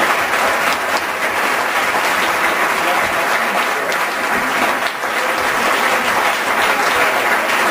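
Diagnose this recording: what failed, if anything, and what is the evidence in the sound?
Nothing stood out on listening, and no stage of the chain gives audible evidence of a failure.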